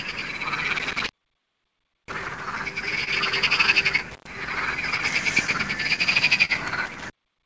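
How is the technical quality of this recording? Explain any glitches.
The technical quality is poor. Repeated dropouts, one stall, a run of small concealment hiccups and a steady timing unevenness all affect the sound. The band stops at 8 kHz, consistent with the G.722 call codec at 64 kbps.

Clock drift between sender and receiver runs through the whole clip. The sending side's clock appears to run about 2 percent slow compared with the receiver's, so the jitter buffer keeps draining. The receiver has to repeat short slivers of audio to keep playback going. You hear this as small, unevenly spaced timing hiccups, a faint stutter or drag that keeps coming back rather than landing at one spot.

Intermittent contact cuts the sound three times: from 0.76 to 2.41 s, with the line open for nearly a second; from 4.11 to 4.27 s, open about 0.10 s; and from 6.86 s to the very end, open about 0.57 s. 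A loose connection breaks the signal path for a moment. Each cut starts and ends with crackle, and faint hiss fills the gap instead of the sound.

A short stall from a late packet occurs from 3.04 to 3.09 s. A packet arrived after it was due, so the jitter buffer ran dry. The receiver held the last sound for 29 ms until the packet came, then carried on from where it left off. Nothing is lost, but the sound hangs slightly too long with a faint buzzy smear, and the delay grows by 29 ms.

Scattered short gaps run from 4.49 to 6.51 s. About five packets went missing or arrived late, spread across this stretch. The receiver bridged each hole by extending the preceding sound, covering roughly 70 ms in total, about 4 percent of the span, with the longest patch around 40 ms. No content drops out, but brief ticks and small smeared hiccups are audible.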